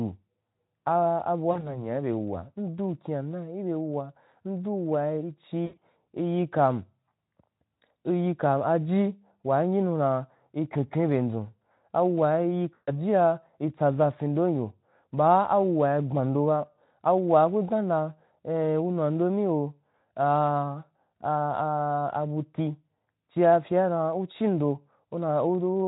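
At 1.51 to 1.77 s, 5.66 to 5.82 s and 12.73 to 12.96 s, VoIP packet loss concealed by the speech codec occurs. Packets go missing, about 40 ms, 120 ms spread over 160 ms, and 140 ms, so the decoder extends the last pitch and filter at falling gain. The speech smears into a fading buzzy tone or coloured noise, then stays weak as the Speex stream recovers.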